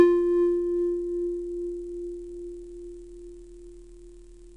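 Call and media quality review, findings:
Wrong sample rate, throughout. Entire clip slowed to about two-thirds speed, pitch down roughly 7 semitones, both shifted together. Probable component: playback or resampling stage. Mechanism: samples clocked out slower than captured, no rate conversion. The ratio fits 48 kHz material played at 32 kHz, stretching every sound in time and lowering it uniformly.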